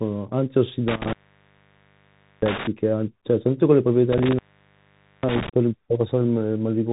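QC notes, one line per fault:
Throughout: Bluetooth CVSD headset codec. The one-bit delta modulator, consistent with a 64 kbps link, cannot keep pace with fast rising waveforms, so loud high sounds distort and s sounds turn scratchy over a granular hiss. Nothing passes above 3.8 kHz, which leaves the speech narrow and muffled.
0.88–2.67 s and 4.12–5.49 s: intermittent contact. A loose plug or cable briefly opens the line, for about 1.29 s the first time and about 0.85 s the second. The speech drops out behind crackles at each break and reconnection, with faint hiss in between.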